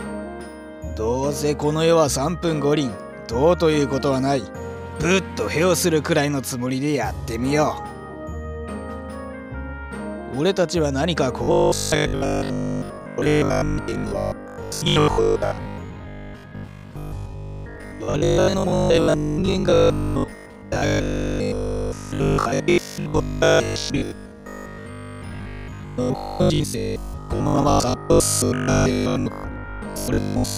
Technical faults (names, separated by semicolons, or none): robotic sound from repeated short buffers